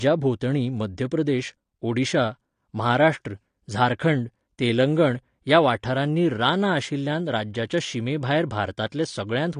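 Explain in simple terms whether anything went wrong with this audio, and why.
The speech sounds dull and smeared from start to finish. Nothing is heard above 9.8 kHz. The likely cause is heavy AAC compression, which discarded fine detail to save space.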